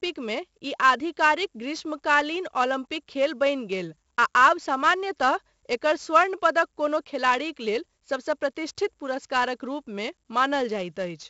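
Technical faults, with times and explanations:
Throughout, 4-bit ADPCM compression. Each sample is coded as a coarse 4-bit step from a predicted value, so a gritty, level-following hiss rides on every loud syllable. Sharp onsets smear and distort where the step size lags behind the signal. The damage is heavy. Nothing reaches above about 7.7 kHz, which dulls the speech and fits a 16 kHz sample rate at the 64 kbps this coding gives.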